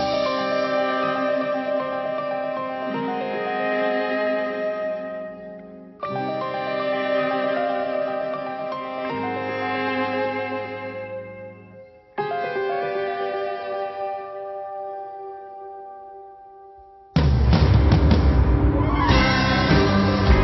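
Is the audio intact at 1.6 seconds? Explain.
Yes, at 1.6 seconds the sound runs on without any break, dropout, click or distortion.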